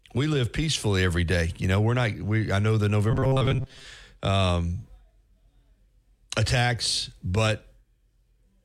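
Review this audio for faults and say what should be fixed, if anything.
Robotic sound from repeated short buffers, 3.11 to 3.85 s: a rigid metallic buzz at 133 Hz, likely from a roughly 7.5 ms buffer replayed repeatedly, replacing most of the real audio. Prevent it by giving the playback buffer more headroom so audio arrives before the previous chunk runs out.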